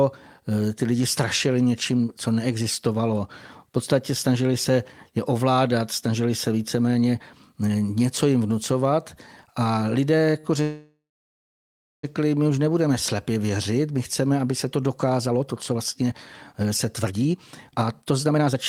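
At 10.39 s the speech briefly hangs, one sound held about 39 ms too long with a faint buzz or dip. This is a short stall from a late packet: the jitter buffer ran dry, and the receiver stretched the last sound until the packet arrived, losing nothing.

From 10.62 to 12.05 s the speech stops. A fading buzz or hiss gives way to about 1.05 s of silence before it resumes with "my už nebudeme slepě". This call audio freeze was likely caused by packets held up in transit. The receiver extended the last sound and then waited, adding a gap of about 1.4 s without dropping any speech.

After "chceme aby se to", from 15.18 to 16.12 s, the speech sounds hurried at about 124% speed with unchanged pitch. From 16.53 to 18.56 s it rushes again at about 130%. This is jitter buffer speed-up: the receiver cut repeated pitch-period slices to shed excess delay, roughly 0.2 s and then 0.7 s.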